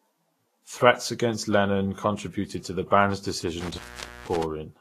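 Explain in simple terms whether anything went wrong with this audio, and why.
The speech sounds hissy and grainy the whole way through, and nothing above about 14 kHz survives. The likely cause is heavy Vorbis compression. To save space, it strips the top treble and blurs the finest detail into a rough, noisy texture.

Between 3.61 and 4.43 s there is an intermittent contact. A loose cable or plug briefly lost its connection. The sound cuts out for about half a second, with crackles where it drops and returns, and only faint hiss in the gap.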